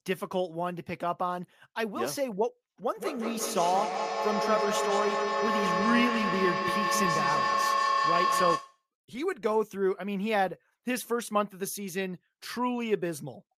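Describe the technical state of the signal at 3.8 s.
A feedback howl runs from 2.94 to 8.87 s. A mic-to-speaker loop keeps gaining, building a tone around 1 kHz, with the loop repeating roughly every 150 ms, about 1 dB above the speech.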